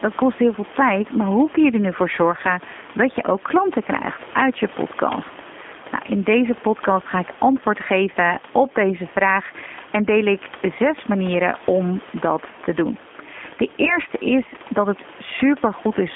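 Throughout the speech, the G.729 codec, consistent with its 8 kbit/s rate, rebuilds the voice from a simple model, confining it to 250 Hz to 3.5 kHz and making it plainly rough and synthetic. Also throughout, gain pumping, likely from gain set too high with a fast limiter clamping it, swings the level by a few decibels, so loud and soft parts end up closer in level and the sound is squashed. From 13.85 to 14.0 s, VoIP packet loss concealed by the speech codec fills a gap of about 20 ms, consistent with one lost packet. The decoder extrapolates a fading buzzy tone or coloured noise, and the voice stays weak or distorted as "is dat het" begins.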